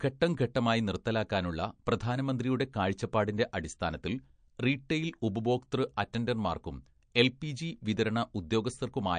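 Throughout, the speech sounds watery and swirly, with nothing above about 9.5 kHz and plainly audible metallic chirps on s sounds. This is likely MP3 compression, which fits a low bitrate of around 48 kbps, where the encoder cuts the treble and lets weak frequency lines flicker on and off between frames.

At 7.14 s, a hiss of about 10 ms leads into a sharp attack, which sounds softened. This is pre-echo. The codec spreads quantisation noise across the whole block, so noise meant for the loud onset also leaks into the quiet moment just before it.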